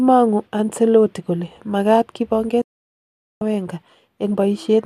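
At 2.62 s the speech snaps to silence within about 3 ms and returns at 3.42 s: a digital broadcast dropout, with the receiver muting roughly 0.8 s of lost frames.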